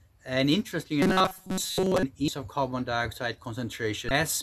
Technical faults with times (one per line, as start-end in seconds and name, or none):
1.02-2.03 robotic sound from repeated short buffers
2.25-2.28 damaged data in a compressed stream
4.08-4.11 damaged data in a compressed stream